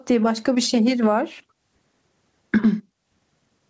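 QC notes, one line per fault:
throughout: gain pumping. The gain swings around 20 dB, so loud and soft parts sit squashed together; likely the mic gain is set way too hot and a fast limiter keeps clamping it.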